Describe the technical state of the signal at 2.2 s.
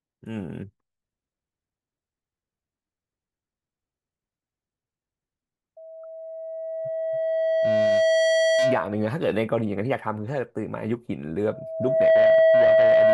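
At 2.2 s the speech signal is intact, with no dropout, clipping, glitch or other fault audible at that moment.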